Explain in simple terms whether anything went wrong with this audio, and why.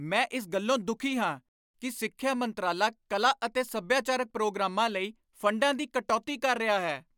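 Nothing went wrong; this recording has no audible problems.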